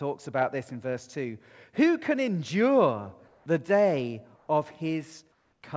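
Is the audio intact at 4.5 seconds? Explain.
No. From 4.36 to 4.48 s, 120 ms of the real background gives way to comfort noise, a steady, featureless hiss about 2 dB quieter. The likely cause is discontinuous transmission filling a pause. Unlike a dropout, the gap never falls silent.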